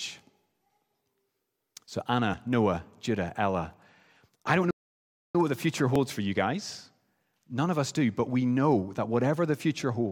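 At 2.34 s there is audio missing between chunks: the recorder likely loses a slice of about 20 ms where one 3-second chunk ends and the next begins, so the speech skips abruptly. From 4.71 to 5.35 s, a playback stall, likely the player running out of data, silences the speech for 0.64 s between "I don't" and "what the future". The same chunk-boundary loss recurs at 5.96 s, between "what the future" and "for you guys", and at 8.94 s, between "do but we know" and "that whatever the".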